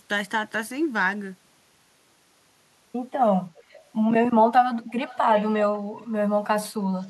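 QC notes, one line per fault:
3.57 to 7.10 s, echo leak: faint delayed copies of the speech surface at 3.57–3.64, 4.88–5.18, 5.35–5.46, 6.01–6.07 and 7.02–7.10 s, each trailing the original by 332 ms. They range from about 35 dB down to about 20 dB below the speech, the loudest at 5.35 s. The short scraps are likely residue that a far-end echo canceller failed to remove from loudspeaker pickup.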